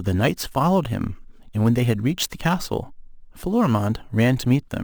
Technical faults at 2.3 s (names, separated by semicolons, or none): imaging from sample-and-hold upsampling